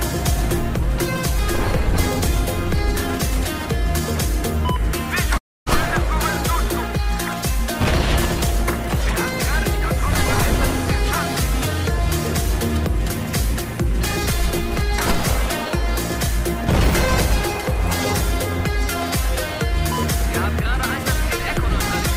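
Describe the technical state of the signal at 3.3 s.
At 3.3 s the signal is intact, with no audible technical fault at that point.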